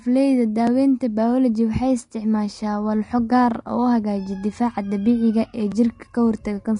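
Throughout, the speech sounds hissy and grainy, likely from Vorbis compression at a low bitrate near 34 kbps. The spectrogram shows speckled treble and nothing above 10.6 kHz.

At 0.67 s and 5.72 s, jumps in the sound mark a likely dropped buffer (overrun) that skips a few milliseconds. The waveform shows an abrupt join with no silent gap.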